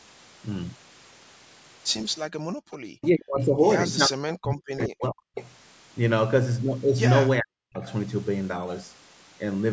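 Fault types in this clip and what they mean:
background gated by the echo canceller: While the loudspeaker was playing, the echo canceller turned the microphone down hard. The room sound sinks by up to about 40 dB from 2.32 to 2.71 s, roughly 400 ms, then comes back once the canceller lets go.
speech suppressed in double talk: Both sides were likely talking at once, and the echo canceller could not separate the talker from loudspeaker echo, so it turned everything down. The speech dips by as much as around 40 dB at 3.01 to 3.58 s, 4.07 to 5.37 s and 7.40 to 7.84 s.
echo leak: One side's echo canceller likely failed to remove all of what its microphone picked up from the loudspeaker, and the remainder was sent back as a delayed copy of the speech. A faint scrap arrives 437 ms late at 3.02 to 3.08 s, and a louder one 450 ms late at 5.35 to 5.45 s.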